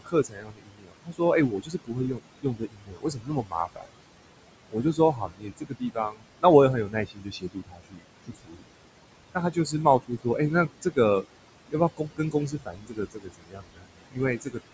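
Speech recorded with room noise sitting about 12 dB below it, passed through call microphone processing with nothing above 8 kHz. Noise suppressor artifacts run throughout: the suppressor pulls steady noise down by about 21 dB, so the background drops away in pauses and swells under speech. On a spectrogram this shows as blotchy, flickering noise patches between speech. Speech cut by the noise suppressor occurs at 0.0–4.01, 4.69–6.44, 6.85–8.69, 9.19–11.26 and 11.69–14.59 s, with dips of about 22 dB that swallow quieter syllables and endings. The affected stretches total roughly three seconds in the first span and about 0.4 s in the fourth. On the waveform they appear as abrupt notches in the speech envelope.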